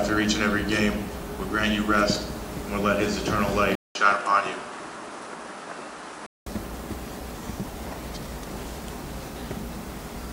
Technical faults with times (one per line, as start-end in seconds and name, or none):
3.75-6.46 input switched to a poorer device